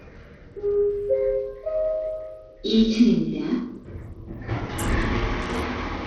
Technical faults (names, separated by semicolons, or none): Bluetooth SBC compression